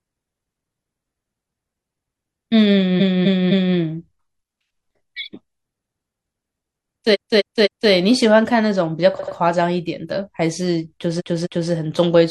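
A run of compressed frames was sent more than once at four points in this speech, so the decoder replayed the same slice of audio. From 2.97 to 3.73 s and 7.10 to 7.87 s a 256 ms block plays three extra times. From 9.15 to 9.32 s an 85 ms block plays two extra times. From 11.16 to 11.67 s a 256 ms block repeats twice. Each is heard as a stutter, and the clip grows by about 2.2 s.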